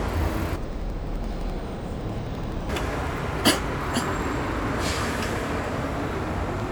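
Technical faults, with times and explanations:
0.56–2.72 s: interleaved audio read as planar. The sound drops an octave and turns doubled and choppy, stepping at about 11.7 Hz. Each 85 ms block, which fits a 4096-sample buffer, has its alternating left-right samples split into halves, each played at half speed.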